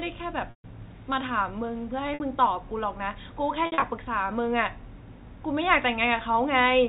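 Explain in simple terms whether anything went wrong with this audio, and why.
Three dropouts from packet loss with pitch repetition: when pieces of the stream went missing, the receiver filled each gap by replaying the last cycle of the sound and fading it out. The worst is at 0.50 to 0.64 s, about 140 ms long, so the held buzz dies into a brief silence. The one at 2.14 to 2.20 s is only 60 ms, a quick buzzy stutter. Around 3.66 to 3.82 s the losses are scattered, with the longest run about 60 ms, so it flickers rather than dropping out. The narrow phone-line sound itself comes through as expected.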